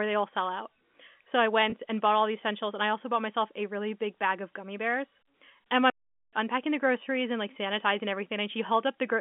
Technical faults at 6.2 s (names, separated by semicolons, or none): playback stall